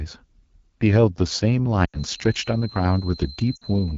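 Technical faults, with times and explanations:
Throughout, AMR wideband (HD Voice) codec: The speech has a rough, raspy edge the whole way, and the damage is plainly audible. The roughness fits the 8.85 kbit/s mode, one of the two lowest AMR-WB rates. At that rate the pulse-based vocal tract model gets too few bits to track the speech closely. The top band, from 6.4 to 7 kHz, is only noise shaped to sit roughly where real treble would be.
1.75 s to the end, feedback whistle: A thin, steady whistle at about 4.1 kHz comes in and stays until the clip ends. It sits well below the speech and slowly swells and fades in level. The likely cause is the loudspeaker-to-microphone loop sitting right on the edge of feedback. One frequency gets just enough gain to keep ringing, but never enough to build and howl.
1.85 to 2.04 s and 3.56 to 3.64 s, lost AMR speech frames: There are two dropouts, about 80 ms at the first and 60 ms at the second. 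Those lengths fit four and three lost 20 ms frames. The decoder fills each gap by reusing the last good pitch and vocal tract settings and turning the gain down. You hear the sound fall to near silence within two frames before it recovers, briefly weak or rough.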